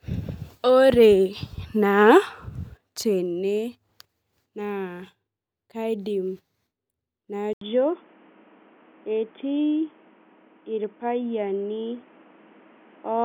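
At about 7.53 s the speech drops out for a short 80 ms gap, and from there to the end everything sounds dull and boxy, with nothing above 3.5 kHz. That's most likely the input switched to a poorer device, maybe a headset's call profile, which passes a much narrower band. The level stays roughly the same, but a new background noise comes in, sitting at a fairly low level, about 35 dB under the speech.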